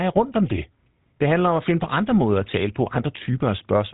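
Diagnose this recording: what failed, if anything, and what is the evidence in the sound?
The codec stage failed: the whole clip carries GSM full-rate coding damage, with a buzzy, gravelly roughness on the speech and nothing above 3.8 kHz. The excitation is rebuilt from sparse regular pulses, which fits a 13 kbps GSM stream. That buzz distinguishes it from simple telephone band-limiting.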